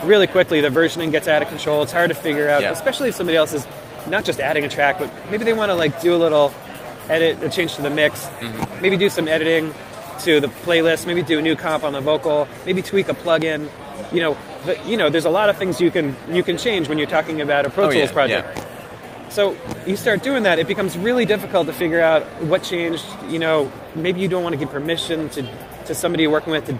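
Clock drift between sender and receiver runs through the whole clip, the sender's clock about four percent fast, so the receiver's buffer keeps overfilling and small slices must be discarded. From 0.09 s to 26.66 s, repeated timing corrections drop short pieces unevenly, yielding 104% speed, slight hiccups, and visible seams or abrupt jumps in the waveform and spectrogram.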